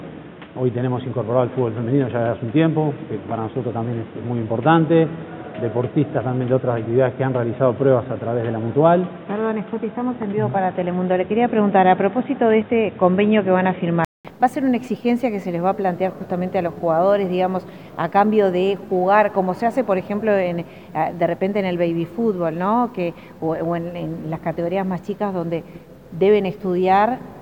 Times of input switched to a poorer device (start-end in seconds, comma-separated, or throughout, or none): 0.00-14.25